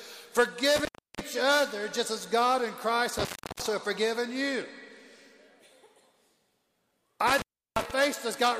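A loose cable or plug briefly opened the signal path three times, an intermittent contact fault. The audio drops out with crackle at each edge and faint hiss underneath, around 0.76–1.21 s, 3.18–3.66 s and 7.27–7.91 s, each gap lasting about 0.34–0.35 s.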